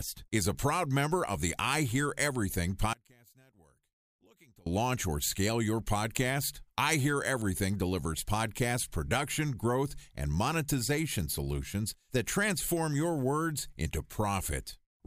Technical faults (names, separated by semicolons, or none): one channel inverted